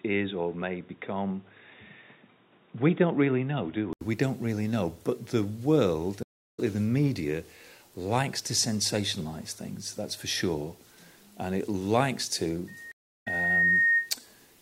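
From the start to about 4.01 s the sound is dull and boxy, with nothing above 3.8 kHz and a steady noise floor about 35 dB under the signal. An 80 ms gap at the switch precedes the clearer sound, with no obvious level jump. The likely cause is an input switched to a poorer, narrower-band device.

At 6.23 s the audio drops out for about 0.3 s and resumes roughly 0.3 s further on. This stream reconnect is a broken connection that the player re-established, restarting its decoder.

From 12.67 s a 1.8 kHz tone swells over about a second into a loudspeaker feedback squeal, peaking about 5 dB above the signal and lasting to 14.13 s. The microphone is picking up its own loudspeaker, with loop gain above one at that frequency. Within the squeal, at 12.92 s, a second stream reconnect silences everything for about 0.3 s, and playback resumes roughly 0.2 s later in the stream.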